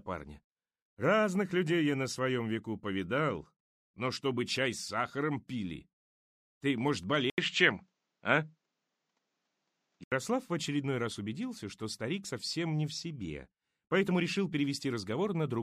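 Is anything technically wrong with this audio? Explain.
Yes. From 7.3 s to 10.12 s, after an 80 ms silence, the sound loses everything above 8.1 kHz, shifts in tone and level by roughly 5 dB, and gains a faint new noise floor. Because level, tone and noise all change together, the likely cause is the input switched to a poorer device, not a simple bandwidth cut.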